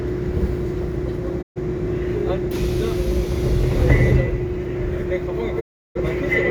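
Digital broadcast dropouts occur at 1.41 to 1.59 s and again at 5.59 to 6.00 s. Each time the receiver stopped getting usable frames and muted until valid ones returned. The sound fades out over about 20 ms into silence, then resumes further along, with the missing material gone. The first hole loses about 128 ms, which fits roughly three frames. The second loses about 341 ms, which fits roughly eight.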